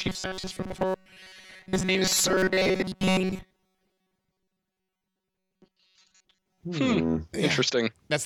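Robotic sound from repeated short buffers runs from 0.01 to 6.61 s of this speech clip, turning the voice into a rigid, metallic buzz at about 188 Hz that still loosely tracks the words. The likely cause is audio arriving too seldom, with the player looping the last fragment to fill the gaps while most of the real signal is skipped. The buzz pitch fits a repeated buffer of roughly 5.3 ms.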